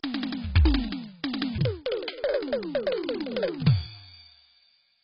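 A music clip that was most likely encoded with AAC at a very low rate, with heavy loss consistent with about 16 kbps. That AAC compression removes everything above 5.5 kHz and quantises the remaining bands coarsely, so the whole clip sounds dull and smeared, with a warbling, fizzy texture on sustained tones. From 1.58 s to the end, the section at the wrong speed, likely from playback against a mismatched clock, runs 1.83 times too fast, so the music rushes forward and jumps up by roughly ten semitones.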